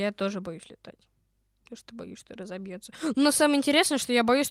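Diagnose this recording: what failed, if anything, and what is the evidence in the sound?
Nothing failed in this recording: the speech signal stays continuous and steady throughout, with no audible evidence of trouble at any stage of the chain.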